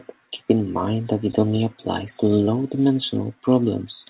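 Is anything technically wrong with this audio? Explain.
No, nothing in this speech is technically faulty; it has been carried over a call path whose narrowband coding leaves nothing above 4 kHz, which fits a telephone codec such as G.711 A-law at 64 kbps working as intended.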